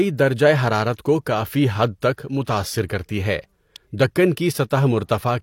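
It's a speech clip with two technical faults. Right at 2.88 s, just before "کرتی ہے", there's pre-echo: a short wash of hiss, about 13 ms long, sitting in front of a sharp attack. That happens when a transform codec quantises a whole block at once. The attack lands late in the block, so the noise budget meant for the loud part leaks back into the quiet bit before it and smears the onset. Then at 3.76 s, just after "کرتی ہے", there's a short, sharp snap sitting on top of the speech, which sounds like an electrical switching spike. The likely culprit is a nearby switch, motor or static discharge arcing briefly and getting picked up on the audio line. It's a separate problem from the codec trouble a second earlier.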